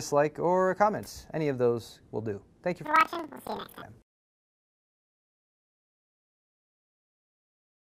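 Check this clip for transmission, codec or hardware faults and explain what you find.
One fault, planar audio read as interleaved, from 2.85 to 3.85 s. Each block stores all left samples, then all right, but is read as alternating pairs, so each block replays twice at double speed. The sound jumps an octave high with a 21.5 Hz flutter, which fits 2048-sample blocks of about 46 ms.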